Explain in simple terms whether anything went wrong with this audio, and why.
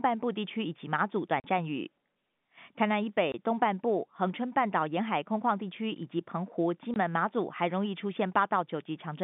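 The speech has three short holes of packet loss filled with silence: from 1.40 to 1.44 s, 3.32 to 3.34 s, and 6.94 to 6.96 s. Each gap is 20 or 40 ms, which fits lost 20 ms packets. Unlike a smoothed-over loss, these are dead silence with hard edges. The narrow telephone-line sound is normal.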